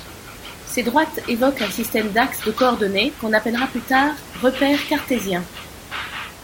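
No technical faults in the speech; the only thing underneath it is the room's own background noise, sitting about 18 dB below the talker and belonging to the recording rather than the signal chain.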